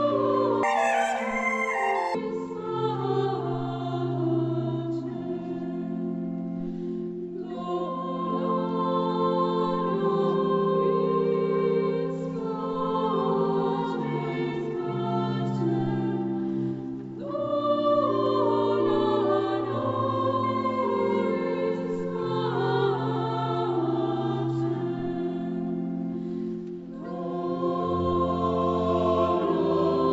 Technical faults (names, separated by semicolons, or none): wrong sample rate